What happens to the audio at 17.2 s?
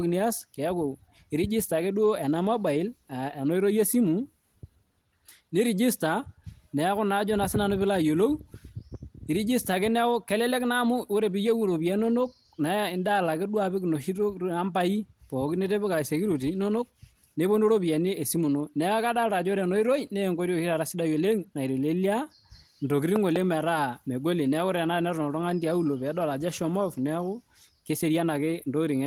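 Nothing goes wrong at 17.2 s: the speech there comes through intact, carried by Opus voice compression in its hybrid mode with only light coding damage.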